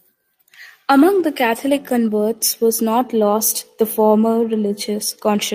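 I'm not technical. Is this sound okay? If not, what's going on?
Yes, nothing in this recording points to a technical problem with the signal itself.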